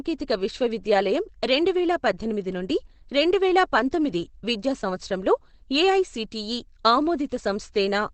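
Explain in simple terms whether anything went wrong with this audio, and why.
The audio was likely squeezed hard by Opus compression, which switches to a speech-only mode when data is scarce. Throughout the clip, nothing above about 8.4 kHz survives, so the speech sounds muffled, dull and hoarse, lacking crisp detail from start to finish.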